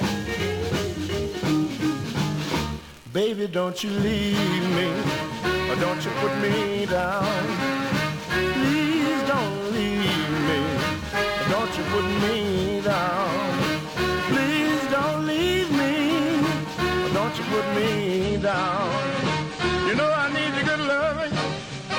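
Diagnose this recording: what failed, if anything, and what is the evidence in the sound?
Adaptive stream at a lower bitrate, a network issue: from 18.23 s to the end, the treble suddenly cuts off above 9.7 kHz with no gap, which fits a switch to a leaner AAC stream.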